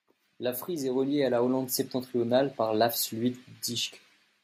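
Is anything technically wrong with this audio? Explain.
Yes. Automatic gain rising occurs from 0.25 to 1.61 s (about 6 dB) and 2.12 to 3.98 s (about 5 dB): the gain control boosts a quiet input, lifting the background with the speech, unlike a talker getting louder.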